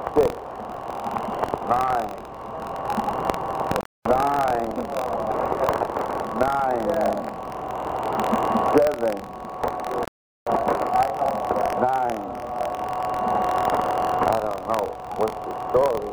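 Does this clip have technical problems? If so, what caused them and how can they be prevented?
Yes. There are two kinds of fault, one running through the whole clip and one at two moments.

Buffer tearing is present throughout as a robotic buzzing rattle at 43.1 Hz that appears whenever there is sound. The program writing the ring buffer and the hardware reading it have slipped out of step, so they cross inside every period. Each time, a small slice of roughly 3 percent is replaced by audio from about 50 ms earlier, with an abrupt join at both ends. The repeat rate fits a 1024-sample buffer. On a spectrogram this shows as evenly spaced thin vertical lines about 23 ms apart, and the waveform shows small discontinuities at the same spacing. Keeping the write position safely ahead of the read position, with correct period synchronisation and enough headroom, prevents it.

There are two rebuffering stalls, from 3.81 to 4.05 s (244 ms) and from 10.05 to 10.47 s (421 ms). 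Each time the player ran out of downloaded audio and stopped until more arrived. The sound cuts out and then resumes exactly where it stopped. Nothing is lost, but about 0.67 s is added in total. The waveform shows a flat, empty gap at each point, and a spectrogram shows a blank vertical band across all frequencies. A larger playback buffer before starting, or adaptive bitrate streaming, prevents these stalls.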